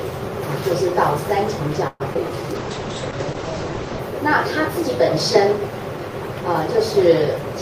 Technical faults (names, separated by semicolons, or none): call audio freeze; short concealed packet loss; call bitrate drop